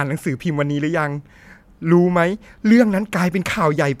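Nothing here sounds amiss at any point in the speech, so there's no technical fault to point to.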